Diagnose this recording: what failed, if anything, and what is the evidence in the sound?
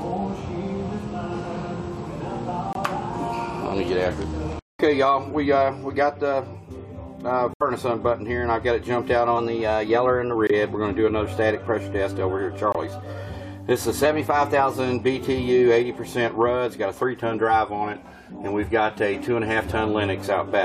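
Codec stage: corrupt frame muted. Abrupt silent holes open at 2.73, 7.54, 10.47 and 12.72 s, lasting 36 to 88 ms. The decoder rejected damaged compressed frames, and the player substituted silence. Timing stays intact.

Playback buffer stage: drift correction step. Speed and pitch jump together by about 6% at 9.38–10.35 s and 14.05–14.79 s, raising pitch about a semitone. At 17.70–18.31 s they drop about 6%, lowering pitch about 109 cents. Each snaps back. A clock-matching resampler likely stepped its rate to manage buffer fill.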